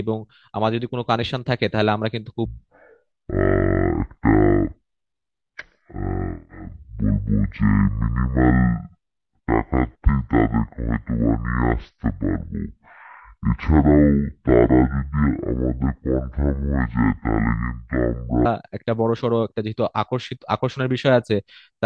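Wrong sample rate from 2.45 s to 18.45 s in this speech: it plays at half speed and an octave low, which fits 44.1 kHz audio played at 22 kHz without conversion.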